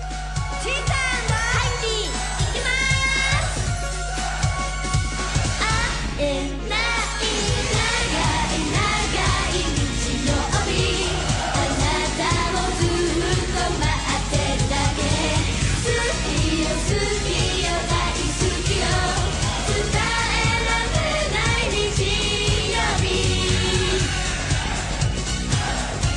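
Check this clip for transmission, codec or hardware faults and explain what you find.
One hardware fault runs through the whole recording: mains hum. A ground loop or nearby transformer leaks the 50 Hz supply into the signal, giving a steady low tone roughly 5 dB below the programme, visible as an unbroken horizontal line on a spectrogram.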